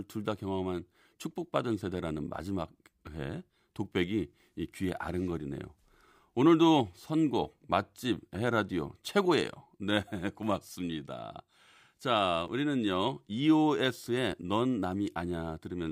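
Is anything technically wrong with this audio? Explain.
Yes. At 3.07 s and 12.48 s the speech jumps, which likely comes from a dropped buffer (overrun): roughly 10 ms of samples was overwritten and the two edges were spliced directly. The waveform shows an abrupt discontinuity, and the spectrogram shows a thin vertical broadband line.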